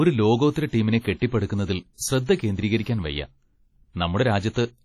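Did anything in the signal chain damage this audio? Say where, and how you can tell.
Yes, at the codec stage, throughout the speech. Transients ring and smear, and hiss swells and fades with the signal. Nothing sits above 17.9 kHz. Heavy damage like this is likely WMA compression at a low rate, which fits about 32 kbps, where long transform blocks spread noise and zero weak detail.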